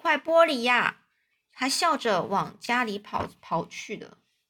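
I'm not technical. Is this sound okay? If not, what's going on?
No, there's one small glitch. At about 2.64 to 2.68 seconds you'll hear a brief jumbled moment. That's chunks out of order: the audio travels in tiny 20-millisecond pieces, and one piece turned up one slot late, so it played after the piece that should have followed it. Nothing went missing, but that split second of speech comes out scrambled, with abrupt joins where the pieces meet.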